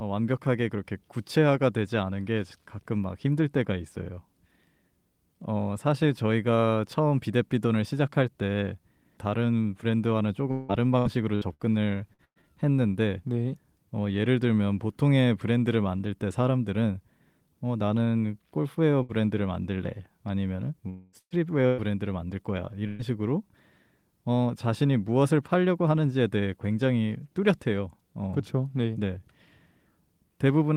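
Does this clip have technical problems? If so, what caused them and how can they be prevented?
Yes. Three kinds of packet-loss fault are audible.

Repeated packet loss (robotic sound) runs from 10.51 to 12.46 s. Seven gaps are patched by continuing the last sound, the longest 172 ms. About a quarter of the stretch is concealed, so the speech turns choppy and robotic. A steadier connection or a larger jitter buffer would prevent it.

Bursts of packet loss occur at 19.03–19.12, 21.19–21.33, 21.66–21.92 and 22.87–23.02 s. Each hole of about 60 to 120 ms is filled with a fading buzz or hiss. The one at 21.19 s drops to silence for 60 ms. Forward error correction or redundant packets would cover gaps this short.

From 20.89 to 21.16 s, about 240 ms is replaced by a continued, fading buzz or hiss with no silence. This is likely a long network dropout. A wired or more reliable network link would prevent it.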